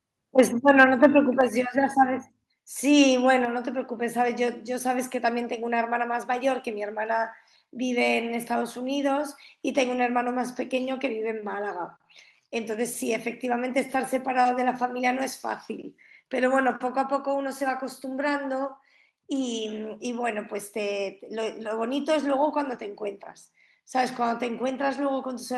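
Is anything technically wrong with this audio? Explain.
Yes. Near the start, the microphone input was likely set too hot for the converter, a microphone overload, from 0.38 to 0.41 s and again from 0.68 to 1.06 s. Peaks ran about 4 dB and about 3 dB past the converter's limit, and their tops were flattened. In the first burst about a tenth of the samples are squared off. The second is longer but only its highest crests are affected. Both add a harsh, crackly grit to the loudest syllables.

The software then appears to have reacted to that hot signal with a microphone volume stepped down at 0.40, 1.41, 3.45 and 16.71 s. Each time, the input level was cut in a single jump rather than eased, by about 4 dB for the first three and about 2 dB for the last. The voice and the background drop together at once. The first step comes right on the tail of the clipped peak, and the level ends up noticeably quieter than where it began.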